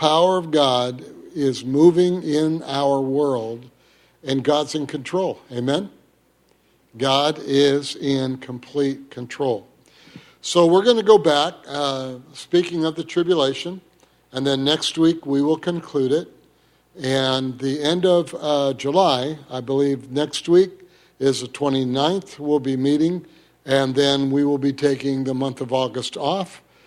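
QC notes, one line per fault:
Nothing here to flag; I went through it and didn't catch a single problem.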